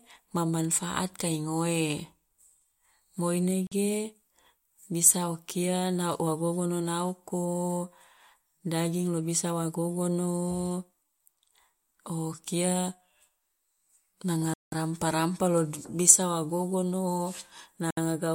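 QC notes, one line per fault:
3.67–3.72 s: block of digital silence. The speech drops out for 46 ms, which fits a 2048-sample buffer left unfilled. It lands as a short pop.
14.54–14.72 s: block of digital silence. A 186 ms gap, which fits an 8192-sample block, is long enough to hear as a clear hole.
17.91–17.97 s: block of digital silence. A 66 ms cut with abrupt edges.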